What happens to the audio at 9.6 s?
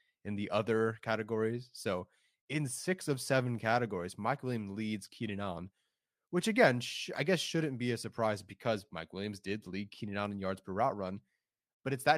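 Nothing goes wrong at 9.6 s: the speech carries on intact through that moment, with no dropout, click, distortion or other fault.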